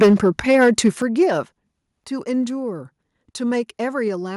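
From 0.01 to 0.89 s the loudest syllables sound harsh and crackly, their peaks flattened with a gritty edge. This is microphone overload. The input level was likely set too high, so peaks ran about 9 dB past what the converter could represent and were sliced off. Roughly 7 percent of the samples in that stretch are clipped.

Three times the whole signal, speech and background together, drops abruptly in level: by about 2 dB at 0.02 s, about 6 dB at 1.02 s, and about 5 dB at 2.04 s. Each drop is a single step, not a gradual fade. This is the microphone volume being stepped down, likely by the call software's automatic gain control reacting to the overloaded input and cutting the device's input volume in increments. The first step comes right at the start of the distorted passage, and the later two follow it.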